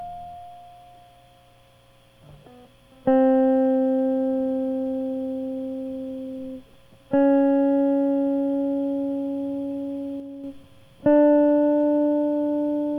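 At 10.2 s the music drops abruptly by about 5 dB, a sudden gain jump. The background falls with it. The level stays down until 10.44 s. This is likely a digital gain change applied between adjacent samples, with no smoothing ramp.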